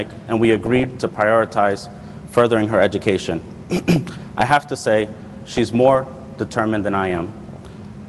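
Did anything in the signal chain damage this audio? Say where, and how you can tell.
Yes. DAB burbling at 0.45–0.87 s, 3.76–4.51 s, 5.48–6.21 s and 7.10–7.66 s, a codec-stage fault from weak reception. Bit errors of a fraction of a percent escaped error correction, corrupting MP2 samples and scale factors, so single sub-bands get short blips of noise and jump in level for up to a frame.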